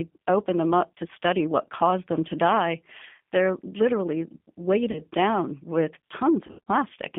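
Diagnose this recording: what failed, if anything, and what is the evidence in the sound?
Codec stage: G.729 coding runs throughout. The band stops near 200 Hz and 3.5 kHz, and the rough, synthetic texture fits 8 kbit/s.

Network stage: VoIP packet loss concealed by the speech codec. At 4.91–5.02 s, before "down with", and 6.47–6.68 s, after "down with", the sound smears into a fading buzzy tone or coloured noise.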